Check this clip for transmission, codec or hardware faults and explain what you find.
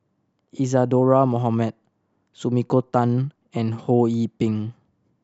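No transmission, codec or hardware faults are audible here.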